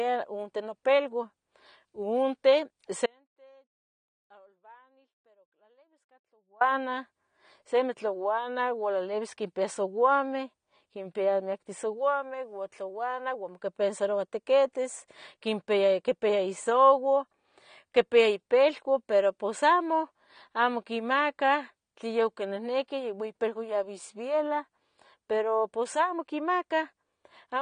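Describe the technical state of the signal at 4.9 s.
At 4.9 s the speech is gone: only a faint trace of the sound remains, around 35 dB below its normal level, inside a gap that opens abruptly at 3.06 s and snaps back at 6.61 s, about 3.5 s in all. This is an audio dropout to a faint residue. The hard edges and the surviving leak point to the wanted signal being lost while the path after the break stayed live, most likely an interruption upstream rather than a pause or fade.

The residue itself, like all the audio around it, carries plainly audible AAC compression. It sounds dull, with nothing above 9.7 kHz, and has a smeared, warbling texture. That fits a low-bitrate AAC-LC encode at around 32 kbps, which is the likely cause. At that rate the encoder spends too few bits on each frame of frequency lines, so it drops the top of the spectrum and coarsely quantises what remains.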